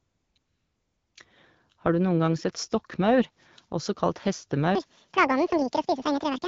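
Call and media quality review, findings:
AMR comfort noise, 0 to 0.35 s and 0.37 to 1.15 s. The real background is replaced by a smooth, steady synthetic hiss that cuts in and out. The sender's voice activity detection flagged silence and stopped speech frames for about 354 ms and then 780 ms. The receiver generated noise from coarse level and spectral parameters, and there is a brief real-signal gap near 0.36 s. The AMR-WB path itself sounds consistent with 12.65 kbit/s, with only light coding texture.

Section at the wrong speed, 4.75 s to end, just after "sett stokkmaur også kalt". Playback runs 1.85 times fast, so speech is hurried and raised by roughly ten semitones, with pitch and tempo shifted together. The likely cause is an editing or playback stage clocking this segment at the wrong rate, pointing to a sample-rate mismatch on the tail segment rather than a codec fault.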